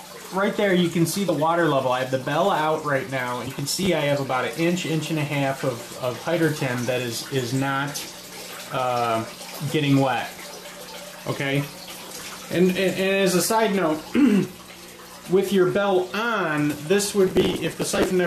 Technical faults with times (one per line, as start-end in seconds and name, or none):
1.28 compressed frames skipped
3.59-3.86 processor overload crackle
11.89-12.41 processor overload crackle
17.27-18.11 processor overload crackle